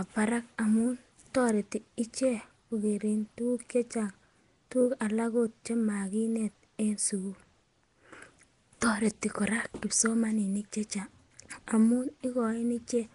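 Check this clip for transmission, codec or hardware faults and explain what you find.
One fault, present throughout: Nellymoser compression, likely from Flash's old Nellymoser Asao codec. Quiet bands get no bits and are filled with noise, so the speech has a rough, hissy halo and a smeared, underwater feel. Nothing comes through above 10.6 kHz.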